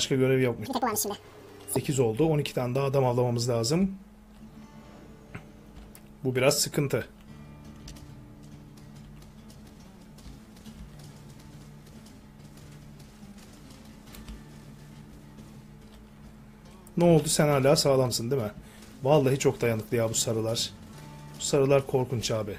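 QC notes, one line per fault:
0.66–1.76 s, audio read two samples at a time (double speed): for about 1.1 s the reader treated each pair of samples as a single frame, as if the stream had two channels or samples twice as wide, so it moved through the audio twice as fast. The sound plays at 2x speed and jumps 12 semitones, a full octave higher.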